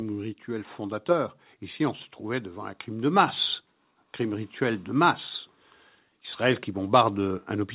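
A speech clip with one fault: automatic gain rising. From 0.45 s to 3.4 s the level climbs gradually by about 5 dB. Voice and background swell together. The gain control judged the input too quiet and kept raising it. The call path cuts everything above 4 kHz, which fits a narrowband telephone codec.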